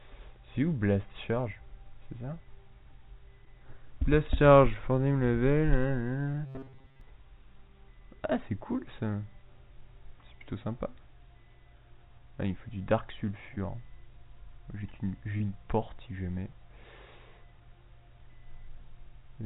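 You're hearing call audio that stops cold at 4 kHz, which fits a narrowband G.711 path. There are four spots of short concealed packet loss, at 3.45 to 3.48, 6.32 to 6.34, 13.54 to 13.58 and 15.38 to 15.41 s. Each is a small smear or wobble where the decoder bridged a gap of one or two hundredths of a second. From 6.46 to 7.01 s there's robotic sound from repeated short buffers: a stiff, metallic 134 Hz buzz, likely from the player looping a chunk of roughly 7.5 ms for most of that stretch.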